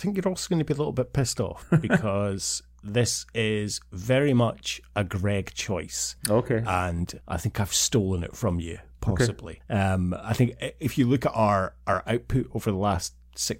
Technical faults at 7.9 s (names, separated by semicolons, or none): mains hum